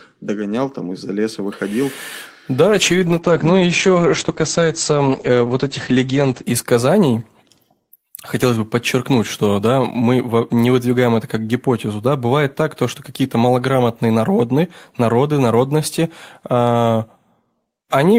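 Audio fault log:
2.68–6.49 s, call bitrate drop: the encoder's bitrate collapses, consistent with about 11 kbps, so speech turns coarse and watery, muffled above 8 kHz.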